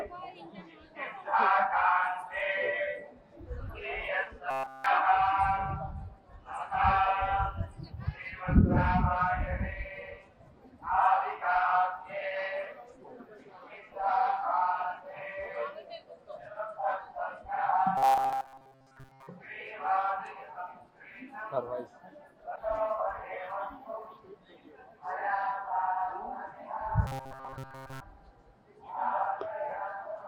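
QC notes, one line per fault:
4.51 to 4.86 s, 17.97 to 19.27 s and 27.07 to 28.00 s: robotic sound from repeated short buffers. A rigid metallic buzz near 133 Hz replaces the sound. The likely cause is a 7.5 ms slice being replayed, covering the whole first span and most of the later two.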